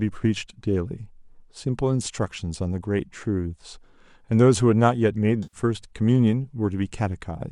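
AAC frame loss with concealment occurs at 5.43 to 5.57 s. Roughly 100 ms of coded speech went missing, which fits about ten short low-delay frames, likely AAC-ELD. The decoder patched the gap from the last intact spectrum, leaving a brief smeared, noisy stretch.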